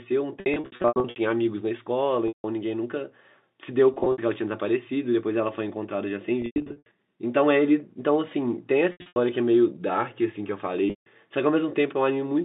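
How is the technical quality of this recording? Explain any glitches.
The recording has repeated dropouts from packet loss with pitch repetition, heard over a telephone-band line of about 200 Hz to 3.7 kHz. At 0.40–1.16 s, 2.28–2.44 s, 3.94–4.18 s, 6.42–6.86 s, 8.92–9.16 s and 10.90–11.06 s the sound turns briefly buzzy and held, as if stuck on one pitch, then thins or fades before clean audio resumes. Packets were lost, and the receiver filled each gap by looping the last pitch period while fading it down. The first and fourth events are the worst. They lose about 420 ms and 320 ms scattered across the span, with runs up to 80–100 ms long enough to fade toward silence. The others lose 120–200 ms.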